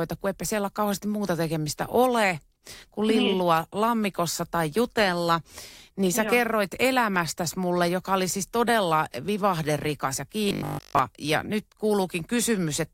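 From 10.49 to 10.99 s, the speech becomes a rigid, metallic 50 Hz buzz. This is robotic sound from repeated short buffers, likely a 20 ms chunk looping throughout.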